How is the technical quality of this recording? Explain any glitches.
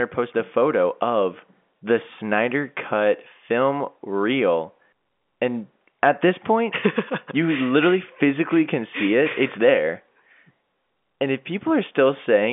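No glitches turn up anywhere in the recording. The speech carries the narrow band of G.711 telephone coding, roughly 150 Hz to 3.5 kHz, with at most a faint, level-following hiss from the telephone coding.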